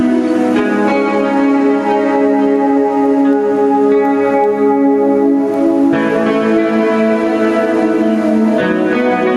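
Gain pumping runs throughout this music: the level is pulled down on each loud passage, a swing of roughly 5 dB, likely from excessive input gain feeding a fast limiter.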